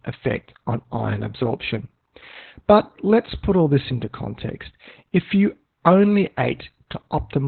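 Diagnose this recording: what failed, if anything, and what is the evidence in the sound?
The codec stage failed: this is heavy Opus voice compression throughout the speech. Nothing reaches above about 4.3 kHz, and the voice sounds muffled, hoarse and slightly robotic, which fits narrowband SILK at around 8 kbps. A plain low-pass filter would only dull the sound, but here the coarse excitation coding also adds that rough, buzzy texture.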